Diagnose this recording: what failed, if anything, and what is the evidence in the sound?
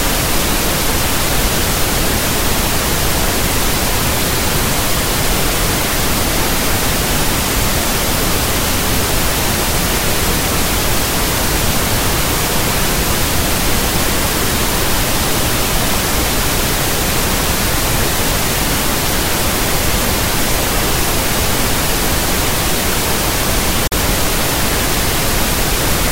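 A Bluetooth dropout at the playback stage is the likely cause. The audio cuts to silence from 23.87 to 23.92 s, a gap of about 46 ms. The sound then resumes further along, as if it had kept playing. That length fits roughly two lost packets on the wireless link.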